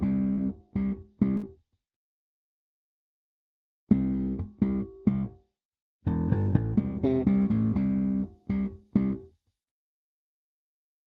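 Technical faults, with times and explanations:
0.33 to 0.39 s, short concealed packet loss: a brief smear in the sound, with about 40 ms of audio lost. That stretch arrived too late to decode, so the receiver filled it by extending the preceding sound for roughly 34 ms and then blended back into the real audio.
1.37 to 1.45 s, burst of packet loss: a held, fading continuation of the sound, then a jump ahead. About 60 ms went missing in a row. The receiver stretched the last sound for about 58 ms while turning it down, so that part of the sound is lost.
7.42 to 10.69 s, pre-emphasis left on: the sound turns thin, bright and hissy. A treble boost following the 50 µs FM curve was applied without the matching cut on playback, which leaves 10 kHz about 10 dB louder relative to 1 kHz.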